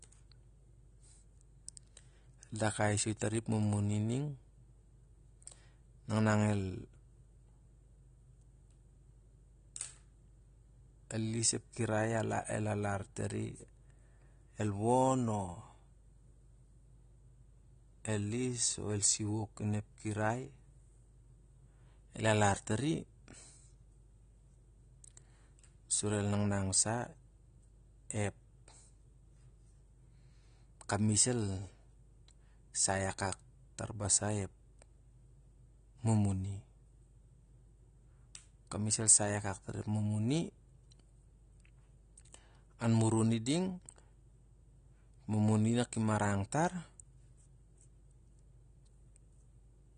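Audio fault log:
Throughout, AAC compression: the speech has plainly audible codec damage, with nothing above about 9.7 kHz, a dull, smeared top end, and a warbling, fizzy texture on sibilants and held sounds. This is likely AAC-LC at a low rate, around 32 kbps, where the encoder drops the highest band and starves the rest of bits. A simple low-pass filter would only darken the sound; the swirling, unstable texture below the cut-off marks it as lossy coding.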